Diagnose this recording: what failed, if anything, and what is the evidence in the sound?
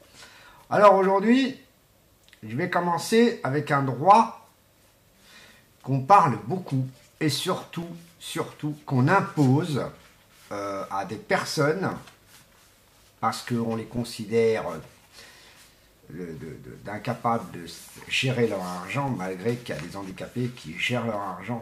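Periodic USB or driver dropouts: the driver stalled every 1.024 s from 7.83 to 21.13 s, leaving ticking silent gaps of about 2 ms, seen as regular waveform notches and thin vertical spectrogram lines.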